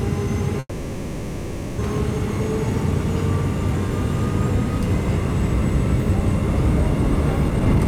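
At 0.59 s the sound stalls in a call audio freeze lasting until 1.80 s. The receiver stretches the last bit into a fading buzz for about 1.2 s, with a brief silence at the end, then carries on where it left off. Nothing's lost, but everything after runs late, most likely because packets got held up and the jitter buffer emptied.

Right at the end, from 7.50 to 7.86 s, there's a jitter buffer speed-up. The receiver snips out tiny slices one after another to shed the backlog, roughly 150 ms in all, so the sound rushes along at about 139% speed without any change in pitch.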